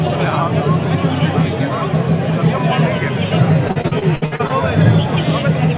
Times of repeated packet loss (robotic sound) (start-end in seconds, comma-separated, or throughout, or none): 3.68-4.51